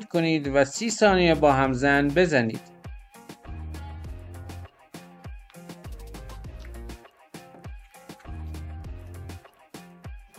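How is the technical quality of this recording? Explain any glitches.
Nothing stood out on listening; no glitches could be heard anywhere in the recording.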